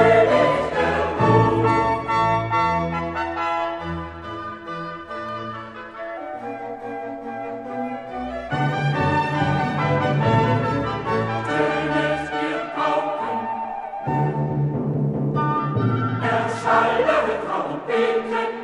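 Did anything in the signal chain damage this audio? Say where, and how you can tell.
Yes: a single sharp click at 5.29 s is dropped samples, likely a buffer glitch. A handful of samples vanish, so the waveform jumps, unlike a dropout's audible gap.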